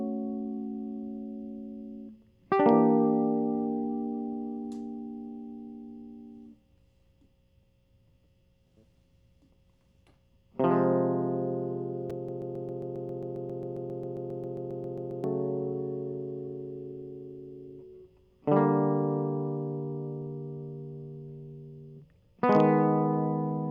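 A stall in the playback or streaming chain likely caused the broken-record loop in this music clip: the system stopped receiving fresh audio and kept resending the last fragment it held. From 12.29 s to 15.24 s, a piece about 0.13 s long repeats back to back 22 times, giving a rapid, mechanical stutter in place of the music. Whatever should have played during those three seconds is lost, and the music resumes afterward.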